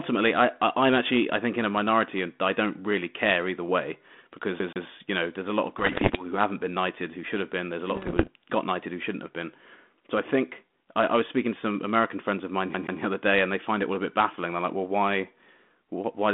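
Speech carried over a telephone-band G.726 ADPCM line, with its content confined to roughly 200 Hz to 3.5 kHz, is interrupted twice by a CD stuck on one turn, at 4.59 to 4.86 s and again at 12.74 to 13.01 s. Each time, a 132 ms slice repeats twice with a brief mute at every jump, giving a quick, even stutter. On a waveform this shows as identical copied blocks separated by tiny gaps. On a spectrogram the same pattern repeats in step. There are also bit errors on an ADPCM link at 5.78 to 6.27 s and 7.95 to 8.28 s. These sound like pops and gritty bursts with sudden level jumps, because each corrupted bit throws off the decoder's step size and prediction for a few milliseconds. The error rate is around one or two percent. On a spectrogram they appear as scattered vertical streaks across the band, and the waveform shows spikes and short swells.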